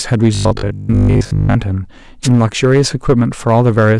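Hard clipping runs through the whole clip. The speech is driven about 5 dB past what one stage can pass, so the loudest peaks are cut flat. Only a small share of the samples go over. Those flat tops add harmonics high in the spectrum. The result is a crackle that lands on the stronger syllables. It never settles into a constant fuzz, because the overload is mild and brief.

From 0.35 to 1.57 s, the speech turns into a rigid, metallic buzz. The sound still roughly tracks the speech. This is robotic sound from repeated short buffers, with a likely cause of new audio arriving too seldom. The gap seems to be filled by replaying the last stretch again and again. Most of the real audio in that span is skipped. The buzz sits at 50 Hz, which fits a 20 ms buffer being repeated.

From 2.23 to 2.28 s comes a wireless microphone noise hit. The radio link of an analogue FM microphone fades here, perhaps as reflected signals cancel. 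The receiver's own noise then rises over the speech. It is heard as a short swish of static. It lasts under a tenth of a second.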